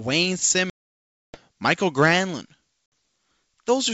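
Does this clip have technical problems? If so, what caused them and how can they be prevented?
Yes. Packet loss on an ADPCM call dropped about 30 packets from 0.70 to 1.38 s and a few more from 2.86 to 2.92 s. The decoder's predictor lost step with the sender's, so each hard silent gap ends in briefly distorted speech before the G.722 wideband sound settles. Jitter buffering with packet-loss concealment and predictor resets would prevent it.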